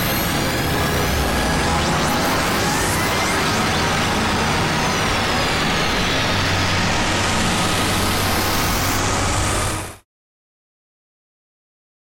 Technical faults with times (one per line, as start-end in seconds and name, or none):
none